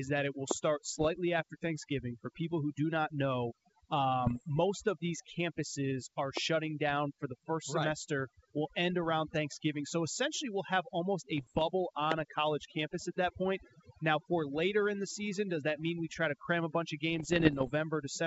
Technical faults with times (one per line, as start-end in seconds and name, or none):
0.00-18.27 overdone noise removal
0.51-0.53 loud pop
0.97-1.08 bit errors on an ADPCM link
4.25-4.43 bit errors on an ADPCM link
6.37-6.39 loud pop
11.37-11.63 bit errors on an ADPCM link
12.12-12.14 loud pop
17.16-17.71 bit errors on an ADPCM link